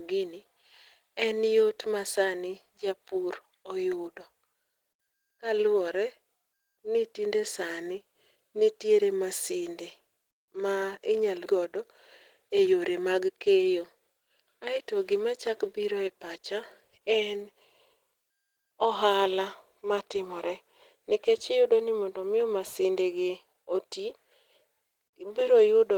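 At 11.45 s, just after "ma inyalo", the speech lurches forward with no pause: around four tenths of a second of talk is simply missing, and the two sides of the cut are joined almost directly, with nothing filled in. This is a skip ahead. Later audio was already queued, and a stretch was discarded, either lost in transit or dropped by an overfull jitter buffer, so playback jumped straight to what was waiting.

Shortly after, from 12.42 s to 13.63 s, the speech sounds rushed. It runs at about 111% of normal speed while the pitch stays unchanged, so it feels hurried rather than higher. This is a jitter buffer speed-up. The buffer was holding more audio than its target, and to reduce that delay the receiver repeatedly cut out tiny pitch-period-length slices, removing roughly 150 ms in total across that second or so.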